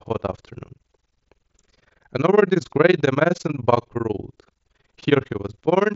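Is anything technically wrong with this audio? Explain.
Yes. Overlap-add ripple runs through the whole speech clip. The audio was split into windowed frames and rejoined with an overlap whose gains never sum to a constant, so the level plunges by about 60 dB once per frame, roughly 20 times a second. This gives a fast, rough flutter, carried over the mSBC headset link, which passes nothing above about 7.7 kHz.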